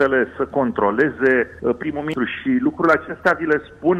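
Hard clipping flattens peaks at 0.01–0.06 s, 1.00–1.32 s, 2.85–3.53 s and 3.89 s, overdriven by about 0 to 2 dB. The loud passages exceed what the stage can pass, giving crackly grit. The waveform shows squared-off tops, and the spectrogram shows high-frequency smear.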